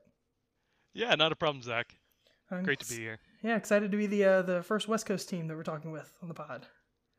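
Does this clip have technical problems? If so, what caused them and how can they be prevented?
No, this clip has no technical problems, so there is nothing to trace back to a cause or prevent.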